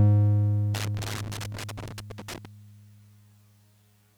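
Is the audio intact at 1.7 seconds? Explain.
No. At 1.7 seconds the music sits inside a stretch of loose connector crackle running from about 0.74 to 2.45 s: an irregular burst of scratchy crackle breaking through the signal. A worn or dirty contact somewhere in the chain is making and breaking rapidly as it shifts, chopping the audio on and off in quick, uneven bursts, while any DC present on the line turns each reconnection into a pop.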